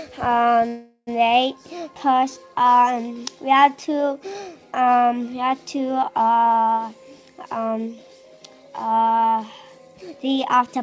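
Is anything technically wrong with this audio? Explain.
Yes. From 0.68 to 1.09 s, a call audio freeze: sound smears into a fading buzz, then about 50 ms of silence, and resumes where it stopped. Held-up packets likely emptied the jitter buffer, inserting a 0.39 s gap. The band ends at 8 kHz, which fits a wideband call codec such as G.722.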